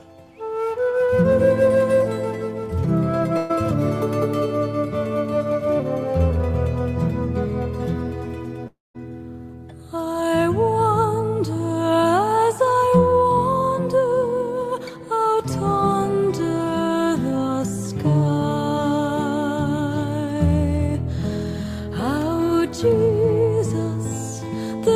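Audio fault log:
3.37–3.51 s, burst of packet loss: For about 120 ms the sound stops moving forward. The last moment is stretched into a held, steadily weakening tone or hiss, and then the audio picks up slightly further along. A short run of packets failed to arrive in time. The receiver filled the gap of roughly 120 ms by extending and fading what it last had, and the material in that gap is gone.
8.67–8.96 s, long network dropout: The sound freezes into a drawn-out buzz or hiss that dies away, leaving about 180 ms of silence before the audio returns. When it returns it has skipped ahead by roughly 280 ms. The likely cause is a longer interruption in which no packets reached the receiver. Its concealment could only prolong the last sound briefly before giving up to silence, so the audio from that stretch never plays.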